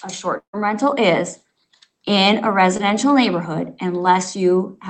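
A long network dropout runs from about 0.37 to 0.55 s. Roughly 160 ms of audio never turned up, and the receiver spent most of the gap extending the last sound it had. That sound decays into a fading buzz before about 100 ms of near-silence sets in. The stream resumes afterwards with the missing piece simply gone, and the fade into dead air most likely comes from a stall in the network delivery.

A short concealed packet loss occurs at 2.77 to 2.81 s, where about 20 ms of audio reached the decoder too late. Concealment patched the hole with roughly 19 ms of synthesised continuation and then blended into the real signal. The result is a quick smear or wobble rather than an audible gap. Behind both faults sits the band-limited sound of the Opus call codec, which cuts off around 8 kHz.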